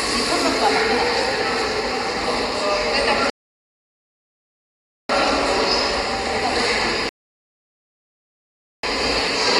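At 3.30 s the sound drops to silence until 5.10 s, then picks up exactly where it left off; again from 7.09 to 8.83 s. That's a rebuffering stall: the player ran dry and waited for data, adding about 1.8 s and 1.7 s without losing anything.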